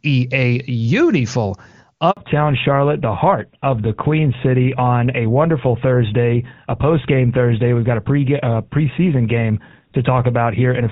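At 2.11 to 2.17 s a handover gap drops about 60 ms of speech as the call switches networks; the waveform falls to a flat line and the spectrogram shows a blank vertical strip. From 2.17 s onward comes a fallback to narrowband: the codec steps down from HD Voice, likely to GSM full rate, and everything above 4 kHz disappears, sounding duller and rougher, with a sharp spectrogram ceiling at 4 kHz.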